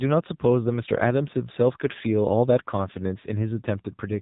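Throughout the clip, the speech carries the sound of the AMR narrowband mobile codec. Nothing reaches above 4 kHz, so sibilants are dull and the voice sits in a boxy telephone band. The codec rebuilds each 20 ms frame from a vocal-tract model excited by a handful of pulses, and here that is plainly audible as a buzzy, synthetic edge. This degree of damage fits a low AMR-NB mode near 7.4 kbps. Ordinary low-pass band-limiting would be dull but clean, without this artificial buzz.

From 3.22 to 3.27 s there is a lost AMR speech frame, a single 20 ms frame that failed its checks. The decoder hid the gap by repeating the previous pitch and vocal-tract settings at reduced gain. The result is a brief dip or warble, not a silent dropout or a click. Because only one frame went missing, there is no drawn-out fade, and the voice recovers almost at once, a little rough for an instant.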